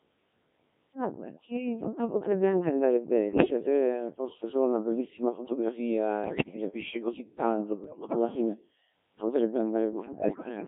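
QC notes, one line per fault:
Throughout, Codec 2 vocoder: robotic, buzzy speech limited to about 150 Hz–3.6 kHz, rebuilt from sine waves using only pitch, voicing, energy and envelope, which fits roughly 1.3 kbit/s.
3.29–3.50 s, 6.24–6.56 s, 7.84–8.16 s, 9.92–10.49 s, bit errors on digital voice radio: bleeps, warbles and sudden pitch and level jumps as flipped bits corrupt whole frames' parameters.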